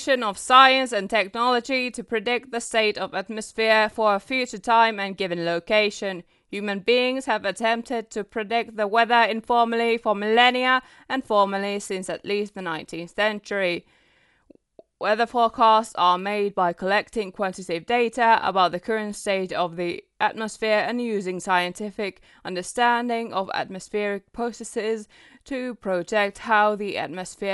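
Dolby Digital compression damage runs through the whole speech clip: nothing is present above 11.4 kHz, and the sound is dull with a rough, fluttering noise around tonal parts. This is likely a low-bitrate encode, around 64 kbps, where lines without mantissa bits are filled with dither noise.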